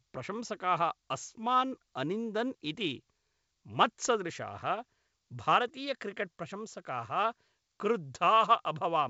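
No technical faults can be heard in this speech.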